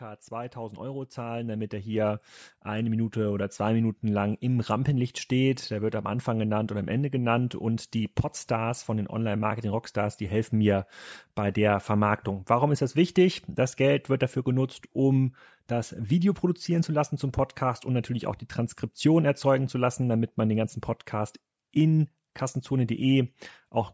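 From 0.28 s to 13.03 s the level climbs steadily by about 12 dB. This is automatic gain rising: the call's gain control judged the input too quiet and kept turning it up across nearly thirteen seconds. Speech and the background noise behind it grow louder together, so the noise floor swells as much as the speech does. That slow, shared rise sets it apart from compressor pumping, which dips and recovers around each loud syllable, and from an abrupt gain step.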